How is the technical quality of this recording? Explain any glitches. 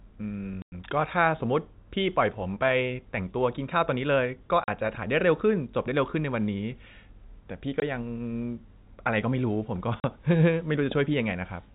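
The recording is narrowband telephone-quality speech, topped out near 4 kHz as G.711 coding implies. Its clear technical fault is four short dropouts where the sound cuts to silence.

Packet loss filled with silence occurs at 0.62–0.72 s, 4.64–4.68 s, 7.80–7.82 s and 10.00–10.04 s. Lost packets were replaced by silence, leaving gaps of 100, 40, 20 and 40 ms, multiples that fit 20 ms packets. Each hole has abrupt edges.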